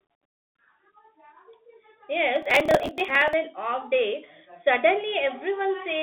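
Speech carried over a Bluetooth CVSD headset codec throughout: the band runs from about 200 Hz to 3.5 kHz, with nothing above 3.8 kHz. On a spectrogram, everything above that is a flat empty ceiling. The one-bit delta coding, consistent with a 64 kbps link, leaves clearly audible damage: a granular hiss under the voice, scratchy sibilants, and slope-overload smearing on loud bright sounds. From 2.36 to 3.33 s, a processor overload crackle tears across the speech. Dozens of audio blocks, each around 10 ms, miss their deadlines and are skipped outright. The waveform shows a run of tiny hard-edged gaps and jumps, and the spectrogram shows them as thin vertical broadband streaks until the load eases.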